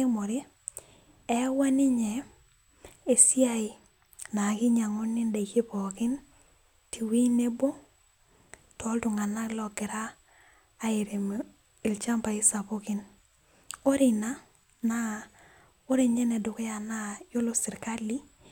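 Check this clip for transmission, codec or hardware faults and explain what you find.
No transmission, codec or hardware faults can be heard in this speech recording, and the signal comes across as technically intact.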